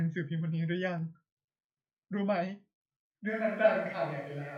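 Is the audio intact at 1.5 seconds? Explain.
Yes, at 1.5 seconds the speech plays through cleanly, with no dropout, click, distortion or other fault to be heard at that moment.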